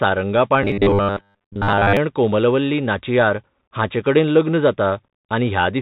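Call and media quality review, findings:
Bluetooth CVSD headset codec, whole clip. Band stops around 4 kHz, s sounds scratchy, granular hiss under the speech, damage plainly audible. Fits the 64 kbit/s one-bit delta modulator of a Bluetooth headset link, its adaptive step lagging on loud highs.

Robotic sound from repeated short buffers, 0.63 to 1.97 s, just before "कोमलवल्ली नाचियार हांचेकडेन". Rigid metallic buzz at 100 Hz, most of that stretch looped. Likely cause is starved playback repeating a 10 ms buffer instead of fresh audio.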